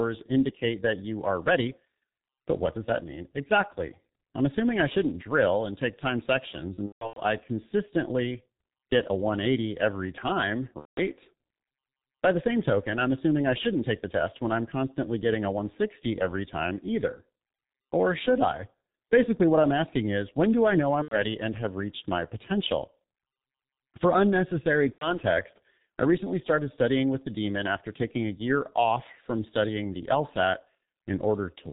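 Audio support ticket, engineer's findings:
Muffled, hoarse speech throughout, nothing above 4 kHz, smeared consonants. G.723.1 codec at 6.3 kbit/s: 30 ms frames and a slowly updated voice model discard high band and detail.

Speech stretches into a buzzy tone or coloured noise that fades, then stays weak briefly, at 6.75–7.21 s (scattered gaps, longest about 150 ms), 10.79–11.01 s, 21.02–21.17 s, 24.92–25.20 s. VoIP packet loss concealed by the speech codec: decoder repeats last pitch and filter with decaying gain.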